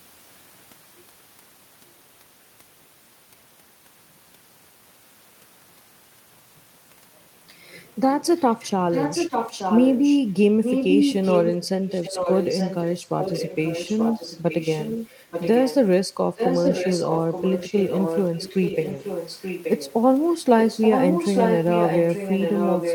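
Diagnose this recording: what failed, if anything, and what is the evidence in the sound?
Echo leak, heard from 8.37 to 10.19 s, 10.63 to 15.76 s, 16.36 to 19.93 s, and 20.6 s to the end, in call processing. A delayed copy of the speech trails the original by about 0.88 s, only about 5 dB quieter. The likely cause is a far end playing the call through a loudspeaker, where its echo canceller failed to subtract what the microphone picked up and sent that residue back down the line.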